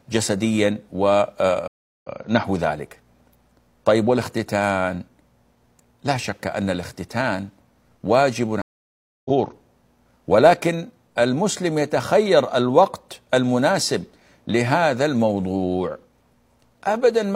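Speech recording that drops out twice, at 1.68 s for 0.35 s and at 8.62 s for 0.64 s. Each time the speech comes back having skipped ahead, by about a third of a second and then about half a second, so a piece of the talk is simply missing. That is a stream reconnect: the connection broke, the player went quiet, then rejoined the live stream further on with a freshly started decoder.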